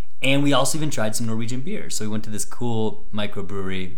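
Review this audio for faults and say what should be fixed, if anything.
A DC offset runs through the entire speech recording, from start to end, with the waveform sitting shifted off zero by a constant of about -17 dBFS. You will not hear the offset as a tone, but it costs headroom on one side of the waveform, brings the clipping point closer, and shows as fixed energy at 0 Hz that can cause clicks at edits. Remove it with a gentle high-pass filter or DC-removal pass, and check converter calibration at capture.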